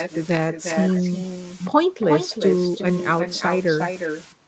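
Throughout this speech, every phrase is trailed by a thinner copy about 6 dB quieter arriving roughly 0.4 s later. This is echo with no canceller: the far end's loudspeaker feeds its microphone, and the round trip returns the talker's own voice. The sound also stops at 8 kHz, as expected on a call path.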